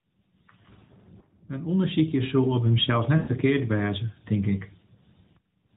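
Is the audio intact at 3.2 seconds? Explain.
No. From 3.18 to 3.31 s there are lost AMR speech frames: about 100 ms of speech is missing, which fits a run of roughly five 20 ms frames that failed their checksum after radio errors. The decoder covers the gap by reusing the last good pitch and vocal tract settings at falling gain, so the sound is drawn out into a smeared, sustained tone that fades toward silence before the speech returns weak or rough for a moment.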